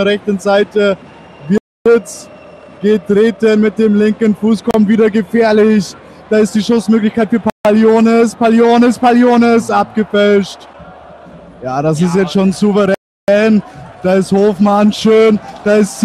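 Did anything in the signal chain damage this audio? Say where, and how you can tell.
Yes. Blocks of digital silence sit at 1.58–1.86 s, 7.50–7.65 s and 12.94–13.28 s. Each drops hard to silence, pointing to an unfilled output buffer.

A gap at a join of encoded pieces opens at 4.71–4.74 s, about 33 ms. Codec delay and end padding were left in, untrimmed.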